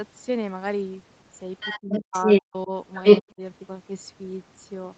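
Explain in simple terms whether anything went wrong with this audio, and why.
Overdone noise removal runs through the whole clip. The background drops and breaks up into twinkling specks. A codec's coding noise would add a general haze; this instead comes from frequency bands being switched off wherever they resemble noise.

Other side's voice leaking through appears from 1.6 to 2.42 s and again from 2.95 to 3.3 s. A second voice comes through, louder than the main speech. This is likely loudspeaker echo the echo canceller missed, so something extra is heard rather than something lost.

Speech suppressed in double talk makes the main speech dip sharply or drop out in pieces at 1.81 to 2.15 s, 2.44 to 2.72 s and 3.21 to 3.41 s, during or right after those leaks. The likely cause is the echo canceller turning everything down when both sides talk at once. Here sound goes missing instead of being added.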